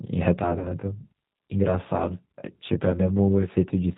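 The whole clip runs through the G.729 codec at 8 kbit/s, so the speech sounds band-limited below 4 kHz, a bit rough and synthetic, with plainly audible codec damage. From 0.39 to 3.58 s there's channel delay (comb filtering): one channel lags by roughly 20 ms before the mono sum, cutting closely spaced notches from around 30 Hz up, so everything sounds rough or slightly doubled. Between 0.59 and 0.72 s there's VoIP packet loss concealed by the speech codec. About 60 ms went missing, which fits three 20 ms packets. The decoder stretches the last sound into a buzzy tone or a coloured noise that fades, and the voice stays weak for a moment after.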